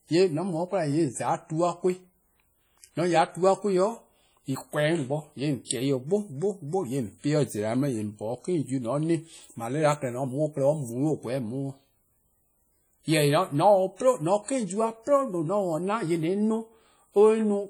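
A speech recording with heavy transform-codec damage throughout. The sound rings and smears, and a washy hiss rises and falls with the level. Weak detail drops out. This is likely WMA compression, and the damage points to a low bitrate around 32 kbps. Long transform blocks spread the quantisation noise across tens of milliseconds. At 5.65 to 5.70 s there is pre-echo. A hiss of about 56 ms comes before a sharp attack, which sounds softened. The block's noise, sized for the loud onset, also fills the quiet gap before it.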